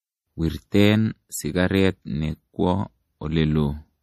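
It's a speech clip carrying plainly audible codec damage the whole way through: nothing above 14.2 kHz, and a watery, swirly texture on sibilants as weak frequency lines flicker on and off. That's likely MP3 compression, starved at something like 40 kbps.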